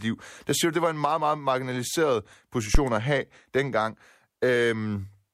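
A speech clip with a phantom power thump from 2.75 to 2.81 s, between "en meget meget marginaliseret" and "at have dengang." A supply switched on or off on the live input, and the step passed through the coupling capacitors. On the waveform it is a sudden one-sided excursion peaking at about -8 dBFS that decays in roughly 13 ms. On a spectrogram it is a brief dark low-frequency burst.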